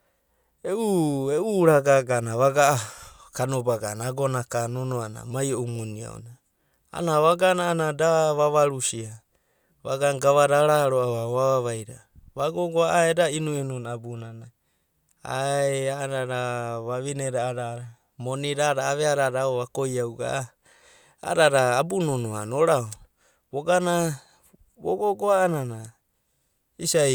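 No technical faults are audible anywhere in this recording.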